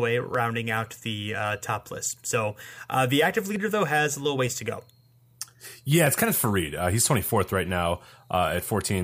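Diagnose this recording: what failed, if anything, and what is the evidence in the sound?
A single sharp click at 0.35 s, just before "out the uh top", likely dropped samples at the driver or buffer stage. Under a millisecond is lost, so there's no audible gap as a dropout would leave.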